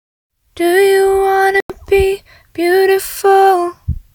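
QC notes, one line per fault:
1.60 to 1.70 s, Bluetooth stall: radio interference most likely held up packets on the wireless link, so the headphone buffer emptied before the resent data arrived and playback halted. The sound drops abruptly to complete silence for about 94 ms, then continues once the buffer refills. The gap is a hard cut with no fade or smearing, which matches a receiver that simply has nothing left to play.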